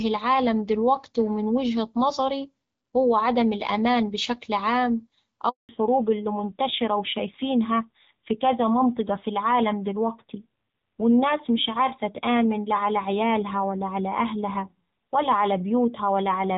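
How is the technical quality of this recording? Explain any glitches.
The recording has two connected glitches at about 5.5 seconds: a short dropout, followed by a lasting loss of high-frequency detail. Before that point the speech is clear wideband audio with light codec texture, which fits AMR-WB (HD Voice) at 12.65 kbit/s.

From 5.49 to 5.69 s, just after "عدم الأمان بشكل عام", the speech fades out within a few tens of milliseconds and leaves about 200 ms of silence. This is a handover gap. While the call moved between networks, no speech frames arrived, so that stretch of audio is missing.

From 5.69 s to the end, the speech sounds duller, more muffled and rougher, and nothing is present above 4 kHz. This is a fallback to narrowband. After the handover the call was re-established on an older narrowband codec, which points to AMR-NB at about 7.4 kbit/s. That codec cannot carry the upper frequencies that HD Voice preserved.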